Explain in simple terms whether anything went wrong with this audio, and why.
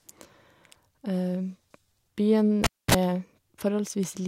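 At 2.64 s a cable pulled and plugged in cuts the speech: a pop, about 0.25 s of near silence, a brief 60 Hz mains buzz, then another pop at 2.94 s.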